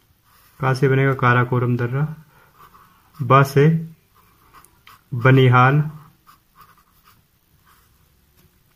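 The audio has one short concealed packet loss between 6.83 and 6.87 s. About 20 ms of the stream did not reach the decoder in time, and the receiver covered roughly 16 ms of that gap by extending the sound just before it, continuing its periodic structure or substituting shaped noise, before crossfading back into the received signal. The result is a brief smear in the sound at that point.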